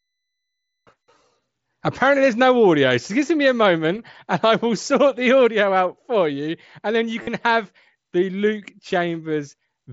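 Concealed Bluetooth headset packet loss occurs from 7.23 to 7.27 s, a gap of about 45 ms in the speech, which fits a run of roughly six lost packets on the wideband mSBC headset link. The receiving phone filled the hole by repeating the stretch of recent waveform that best matched what came before, so instead of silence there is a short buzzy, tone-like hold at full level, followed by a slight warble as the real speech resumes.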